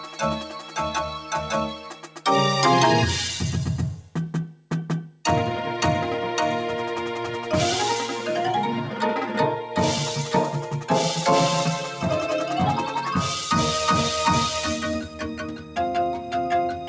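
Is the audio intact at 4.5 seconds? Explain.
No. From 4.01 to 5.24 s the sound is cut by the noise suppressor, which mistakes it for noise and pulls it down by up to about 10 dB. Sustained parts sink and decays end early, with the waveform envelope visibly dipping. Throughout the clip, a noise suppressor applied to music or sounds makes the level swing by roughly 10 dB, so held sound pumps and thins while attacks survive. On a spectrogram, tails look chopped.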